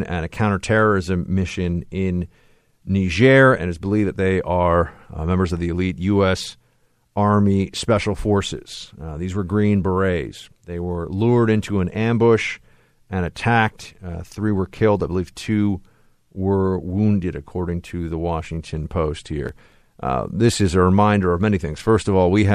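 From 19.46 to 19.96 s, just before "uh this is a", gritty crackle tears through: processor overload crackle, as dozens of roughly 5 ms buffers are skipped.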